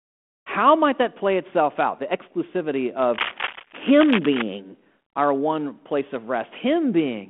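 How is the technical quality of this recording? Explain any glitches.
The main glitch is a stretch of cable scratch noise from 3.13 to 4.42 s, riding on a telephone-band speech signal that has the narrow 200 Hz to 3.4 kHz sound of a 32 kbit/s G.726 link. For that second and a bit, a dense, uneven scratchy rustle sits over the speech, nearly as loud as the speech itself. It's most likely a worn cable, connector or control being moved, so the contact resistance flickers rapidly and dumps bursts of noise into the signal.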